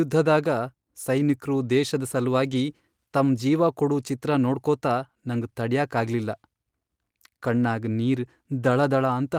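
At 2.51 to 2.53 s, just after "ಸೈನಿಕ್ರು ದೇಶದ್", there is a lost packet rebuilt from error correction. The speech runs on without a gap, but for about 20 ms it turns briefly rougher and noisier. That fits one dropped packet whose coarse low-bitrate copy, carried in the following packet, was decoded in its place. This sets it apart from plain loss concealment, which guesses from earlier audio and tends to smear or buzz.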